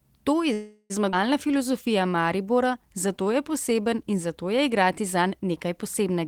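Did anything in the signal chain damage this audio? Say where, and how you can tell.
Yes. From 0.53 to 0.92 s the sound stalls into a fading buzz, about 365 ms long, then resumes exactly where it stopped. Nothing is lost. This is a call audio freeze, likely caused by delayed network packets draining the jitter buffer.

At 1.12 s playback jumps forward. Roughly 200 ms of speech is gone, and the two sides join with almost no gap. This skip ahead is a network or jitter buffer fault: a stretch was dropped while later packets were already waiting.

From 1.47 to 3.83 s, ending just before "in zato je igrati", speech runs at about 93% speed with unchanged pitch. Sounds are drawn out, adding 175 ms. This jitter buffer slow-down comes from the receiver repeating pitch periods to rebuild its reserve.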